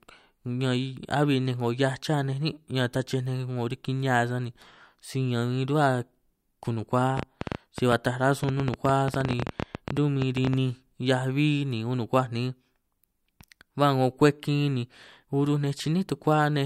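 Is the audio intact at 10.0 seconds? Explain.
No. At 10.0 s the audio falls inside a train of clicks that runs from 7.18 to 10.54 s. Sharp, similar-shaped pulses arrive about 11 times per second at an uneven pace, around forty in total, peaking well above the speech, on the order of 15 dB louder. They are heard as ragged ticking laid over the speech and through its pauses, likely caused by interference from nearby equipment or a faulty connection or power supply.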